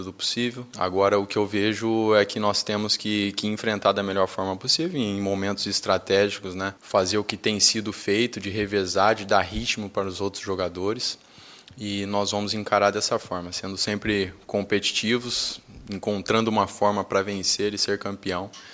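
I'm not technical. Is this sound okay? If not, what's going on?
Yes, it sounds fine, with nothing wrong to hear.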